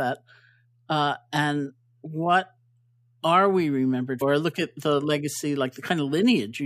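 At 4.21 s a brief glitch cuts into the speech: damaged data in a compressed stream, where corrupted bytes made the decoder misread frames and lose sync.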